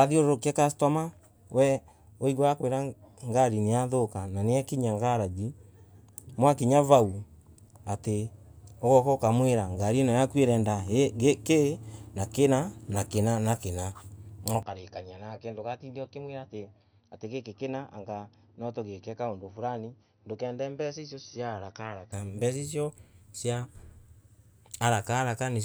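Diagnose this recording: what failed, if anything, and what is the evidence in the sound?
At 14.63 s, right after "kina na kina na", the speech turns dull and boxy. Nothing remains above 6 kHz, the level falls by about 10 dB, and a new, faint noise floor appears with no gap at the change. Full bandwidth returns at 22.12 s, just before "mbeca icio cia". This is likely an input switched to a poorer device at the driver stage. A codec bandwidth cut would narrow the band alone, but here the level and background noise change as well, which points to different hardware.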